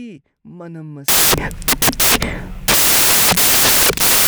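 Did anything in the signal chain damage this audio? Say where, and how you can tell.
Yes, at the sample-format conversion stage. From 1.08 s to the end, the speech turns into loud, harsh broadband noise. These are samples built from the wrong bytes, so the low bits dominate.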